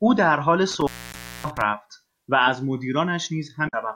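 From 0.70 to 1.61 s there is an intermittent contact. A loose plug or cable briefly opens the signal path. The speech drops out for about 0.57 s in total. Crackle marks the edges of the break, and faint hiss fills the gap.

At 1.12 to 1.15 s, inside that span, there is damaged data in the compressed stream. Corrupted bytes make the decoder misread frames and lose sync. It is heard as a short glitch. A longer glitch of the same kind follows at 3.65 to 3.74 s.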